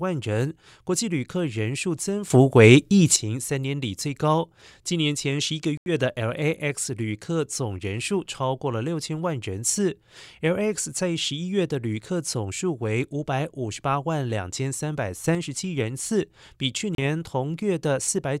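Sudden gain jumps hit this speech recording at 2.30–3.16 s, about 12 dB louder, and at 15.24–15.35 s, about 6 dB louder. Speech and background noise step up together with no fade and then drop back, likely from a digital gain change applied instantly rather than ramped. Bluetooth stalls cut the sound out at 5.77–5.89 s, with about 87 ms of silence, and at 16.95–17.00 s, with about 33 ms of silence, before the audio resumes. The likely cause is interference delaying packets so the headphone buffer ran empty until resent data arrived.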